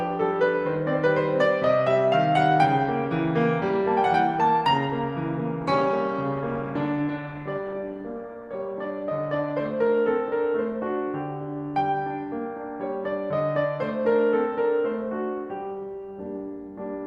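Music with a call bitrate drop from 5.62 to 10.37 s: the sound turns coarse, watery and dulled at the top, fitting a fall from about 64 to 28 kbps. Unlike packet loss, it has no gaps or glitches, just sustained degradation that recovers.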